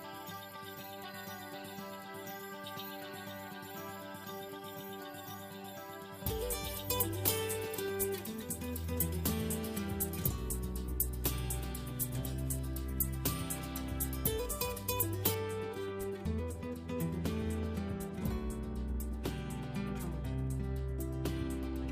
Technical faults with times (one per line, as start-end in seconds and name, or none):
0.00-15.34 pre-emphasis left on